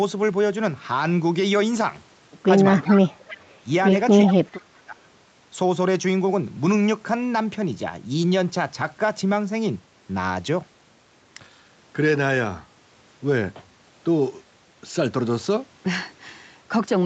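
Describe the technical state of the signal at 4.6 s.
At 4.6 s the speech falls inside a deep dip, around 30 dB, from 4.26 to 5.03 s, likely speech suppressed in double talk by an echo canceller attenuating the near talker.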